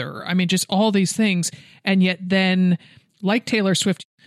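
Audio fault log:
No faults detected in the speech audio; nothing to log.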